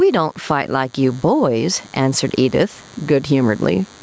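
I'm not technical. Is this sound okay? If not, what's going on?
No, two problems run through the whole clip. A nearby DECT cordless phone or its base station sends radio bursts 100 times a second, which the audio circuit picks up, leaving a quiet, thin, steady buzz under the speech. There is also gain pumping: the microphone level is likely set far too high, so an automatic limiter keeps yanking it down on loud moments, and everything sounds squashed.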